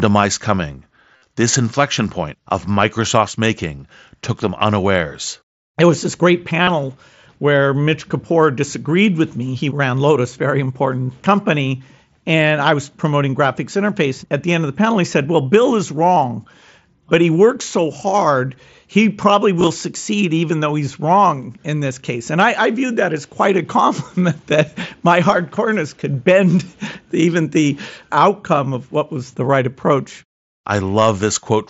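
Concealed Bluetooth headset packet loss hits at 1.17 to 1.22 s and 6.63 to 6.67 s, where lost packets get filled by repeating recent waveform, giving a brief buzzy held tone and a small warble on recovery. At 19.59 to 19.67 s the losses are scattered, with no gap over 15 ms, through the mSBC wideband audio.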